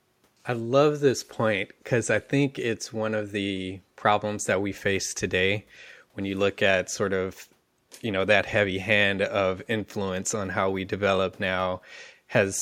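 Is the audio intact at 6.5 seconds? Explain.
Yes, at 6.5 seconds the speech plays through cleanly, with no dropout, click, distortion or other fault at that moment.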